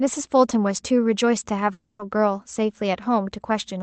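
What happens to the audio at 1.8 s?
From 1.73 to 2.01 s the sound gives way to a fading buzz, then a brief silence. This is likely a long network dropout. No packets arrived, so the receiver extended the last sound for about 260 ms. That lost stretch never returns.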